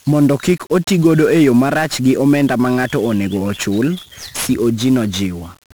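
From start to finish, the speech has been squeezed through 1-bit DFPWM compression, which keeps only a single up-or-down bit per sample to nudge an adaptive level toward the waveform. The damage is heavy, consistent with a stream of about 48 kbps. That coarse tracking leaves dense broadband quantisation noise riding on every syllable, so the speech comes across fuzzy and crackly, with its upper frequencies smothered under a constant hiss.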